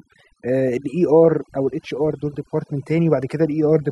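Overdone noise removal runs through the whole of this speech clip. The noise reduction was pushed far too hard, so the gaps between phrases fall to near silence with twinkly little specks, and the voice loses its quieter detail, which got chopped along with the noise.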